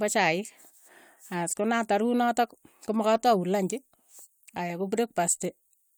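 Speech, with nothing technically wrong with it.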